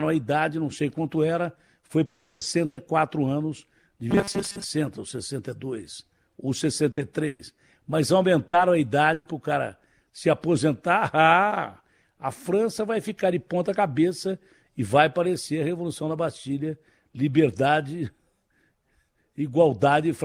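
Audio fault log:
2.05–2.44 s, long network dropout: Right after "sei quanto era foi" the audio cuts out for about 0.39 s, most likely a stall in the network stream. The receiver fills the hole by carrying on the last sound as a fading buzz or hiss, so there's no dead silence. When the audio comes back, roughly 360 ms of the original has been skipped rather than delayed, which is why the speech seems to jump ahead.
2.65 s, 6.91 s, 7.27 s, 8.47 s, 9.13 s, burst of packet loss: Five short gaps, 120, 60, 120, 60 and 120 ms long. The last one ends just before "o cara se aposentar". Each time, a run of packets never made it in time. The decoder stretched the last bit of sound and turned it down, so you hear a brief held buzz or a fading hiss, and then the speech picks up again with that slice gone.
4.11–4.64 s, robotic sound from repeated short buffers: For about half a second the speech turns metallic and rigid, with a 200 Hz buzz imposed on it while still loosely following the syllables. 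The likely cause is fresh audio arriving too slowly, so the playback keeps looping a tiny chunk to cover the gap. A 200 Hz buzz fits a 5 ms chunk repeated over and over, and those repeats fill most of this stretch.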